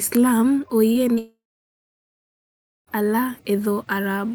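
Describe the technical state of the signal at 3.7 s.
At 3.7 s the speech signal is intact, with no audible technical fault at that moment.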